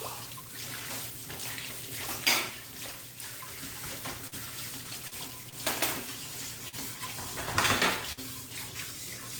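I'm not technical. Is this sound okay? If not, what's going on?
No. There are three kinds of glitches, all from the audio travelling over a network connection.

At 4.27 to 4.35 s and again at 6.68 to 6.75 s you hear a brief smear or wobble. This is short concealed packet loss: about 40 ms of sound never arrived in time, so the receiver imitated the previous sound to cover the hole, and that bit of the original is gone.

At 5.08 to 5.15 s and 5.49 to 5.55 s the sound hangs for a moment with a slight buzz or dip. Each is a short stall from a late packet: a piece arrived late, so the receiver stretched the last sound by about 40 ms and then 30 ms, then carried on. Nothing is lost.

At 8.12 to 8.20 s there is a held tone or hiss that fades down before the audio jumps ahead. This is a burst of packet loss: about 40 ms of sound was lost, and the receiver filled the gap with a fading continuation.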